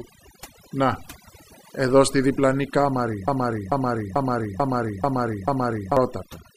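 It's a speech clip with overdone noise removal running the whole way through. The background has been pushed down to near silence with little twinkling specks, and quiet parts of the voice sit close to the noise estimate and get stripped out along with the noise. Right after "εδώ στη διπλανή κάμαρη" there's a broken-record loop from 3.28 s to 5.97 s, where a 440 ms fragment repeats back to back six times. That's likely a player or stream stall resending its last chunk, so whatever should have played there is gone.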